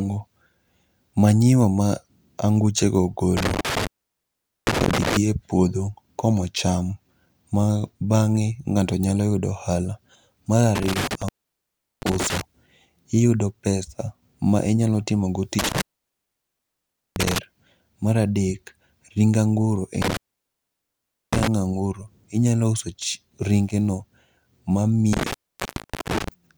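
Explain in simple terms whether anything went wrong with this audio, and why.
The speech drops out five times because of an intermittent contact, a loose cable or plug briefly breaking the connection. Each gap starts and ends with a crackle, leaving faint hiss. They occur at 3.37 s (after "manyiwa ma anguchego"), 10.75 s, 15.59 s, 20.02 s and 25.13 s. Each lasts roughly 0.7 to 1.3 seconds.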